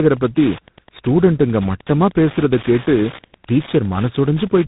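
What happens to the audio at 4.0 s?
At 4.0 s two faults are present, and neither is local to that moment. Both run through the whole clip.

Wi-Fi interference: a Wi-Fi radio sits close enough to the audio circuit that the circuit rectifies its transmissions, and the beacon it sends every 102.4 ms becomes audible. Around 4.0 s this is a steady ticking just under ten times a second. It sits roughly 20 dB below the speech and carries on through pauses as well as through the talking.

Tandem speech coding: the call passed through more than one speech codec in sequence. It was decoded and then re-encoded at each handover, so the last coder worked on audio that was already degraded. The sound fits two lossy speech coders in a row, such as a GSM-style mobile leg followed by a G.726 ADPCM leg. At 4.0 s the speech is rough and muffled, with a warbling quality, and nothing is left above 3.8 kHz.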